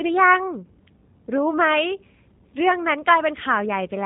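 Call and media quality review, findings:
G.729 codec throughout: band-limited at 3.8 kHz, plainly rough, synthetic speech texture from pulse-based frame reconstruction, consistent with 8 kbit/s G.729A encoding on the media path.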